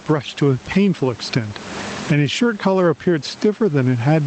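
Gain pumping runs through the whole speech clip. The room noise sits about 31 dB below the speech, and the gain swings roughly 20 dB, likely from excessive input gain feeding a fast limiter. The waveform looks flattened.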